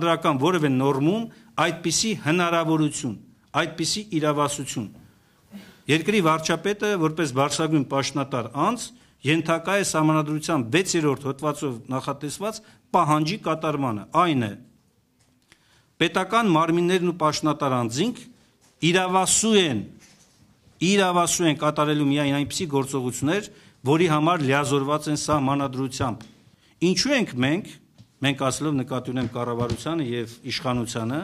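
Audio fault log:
throughout, sample clock jitter: a faint hiss and roughness riding on the sound, swelling on loud and bright passages and vanishing in silence. The converter's clock wanders by under a microsecond, so samples land early or late; steep waveform slopes turn that timing error into noise about 40 dB down.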